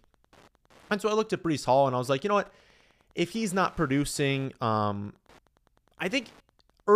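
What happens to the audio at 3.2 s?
At 3.2 s the speech carries Wi-Fi interference, which runs through the whole clip rather than starting there. A nearby Wi-Fi radio's beacon, sent every 102.4 ms, is rectified by the audio circuit, giving a steady ticking about ten times a second, sitting roughly 35 dB below the speech. On a spectrogram it shows as thin vertical broadband lines spaced evenly about 0.1 s apart. On the waveform it appears as small regular spikes.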